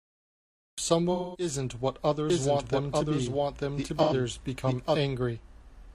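The clip opens with a cut-off start: digital silence until 0.78 s, then the speech just appears mid-sound with no attack or fade, as if the recording began a beat late and caught the talker already going.

At 1.12 to 1.48 s there's AAC frame loss with concealment. About 213 ms went missing, which fits five lost frames, and the decoder papered over it by reusing the last good spectrum, so you get a smeared, phasey, noisy patch instead of clean speech.

From 2.30 to 4.96 s a doubled audio track comes in: a full-band copy of the speech running roughly a second behind, at about the same level. It's dry, with no room colour, and it switches on and off abruptly. Most likely a second, slower capture path got mixed in.

Inside that stretch, 4.02 to 4.13 s has another short AAC frame loss. It's 85 ms, consistent with two frames, and sounds like a brief smeared blip.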